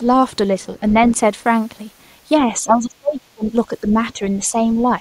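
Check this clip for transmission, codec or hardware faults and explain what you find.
Two echo-canceller problems turn up in this speech clip, each appearing twice.

Other side's voice leaking through at 0.79–1.2 s, about 20 dB under the talker, and briefly at 3.46–3.5 s, about 25 dB under. It's a faint second voice, likely loudspeaker echo the canceller didn't fully strip from the mic.

Speech suppressed in double talk from 2.38 to 3.44 s, where the talker drops by as much as about 30 dB across roughly a second, and again at 3.68–4.59 s with a milder dip of about 5 dB. The likely cause is the canceller mistaking overlapping talk for echo and pulling the talker down with it.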